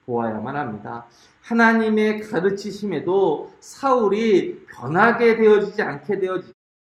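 Nothing here needs flagging, just a gentle fade-out at the very end, easing down from around 6.5 s and done by 6.54 s the way an editor would finish it.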